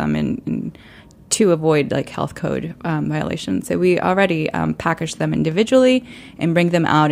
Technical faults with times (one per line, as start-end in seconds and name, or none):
none